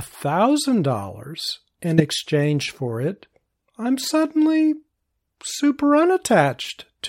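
At 1.98 s the speech is cut by a short, harsh blip lasting until about 2.01 s, peaking at around -5 dBFS. This is a corrupt frame decoded: bits in what sounds like a single compressed frame were damaged, yet the decoder played it anyway. Misread gains and codes put energy in the wrong frequency bands for the length of that frame, producing a chirp-like burst instead of the intended sound.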